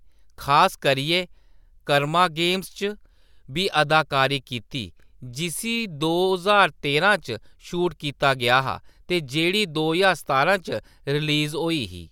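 No technical faults can be heard anywhere in the recording, and the signal holds steady from its opening moment to its close.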